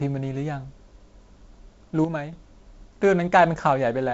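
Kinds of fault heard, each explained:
One channel drops out: The speech abruptly falls about 6 dB from 2.05 to 2.33 s. Likely cause: one stereo channel lost before mono summing.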